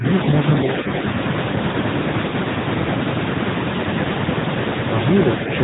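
From the first moment you can hear the squeeze of the AMR narrowband mobile codec: nothing above 4 kHz gets through, so the speech sounds boxed-in and phone-like. The codec rebuilds each 20 ms frame from a vocal-tract model fed by a handful of pulses, and at this rate the voice picks up a plainly audible buzzy, synthetic edge, which fits a mid-rate mode around 10.2 kbps.

Then, at about 2.28 to 2.33 s, there's a lost AMR speech frame, just one frame's worth, roughly 20 ms. It failed its error check, so the decoder filled the gap by replaying the last good pitch and vocal-tract settings at reduced gain. What you hear is a quick dip or small warble in the speech, and then the voice picks back up, a touch weak or rough for an instant before it settles.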